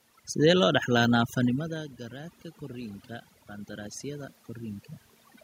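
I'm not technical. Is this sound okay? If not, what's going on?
No. Throughout the clip there is overdone noise removal. A cleanup tool set too strong chews away the room's background noise along with the quieter parts of the voice. The gaps drop away and break up into twinkling specks, unlike an ordinary quiet room, which just sounds calm.

From 1.66 to 4.92 s there is automatic gain rising. The talker moved away from the microphone around 1.5 s, and the recorder slowly turned itself up to compensate. What gives it away is that the background swells along with the voice over those few seconds, whereas the talker's own movements change only the voice.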